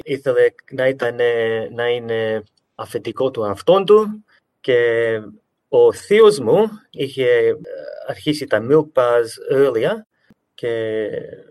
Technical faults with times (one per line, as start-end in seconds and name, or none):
none